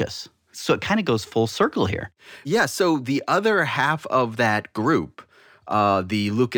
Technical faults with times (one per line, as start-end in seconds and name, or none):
0.00-6.58 imaging from linear upsampling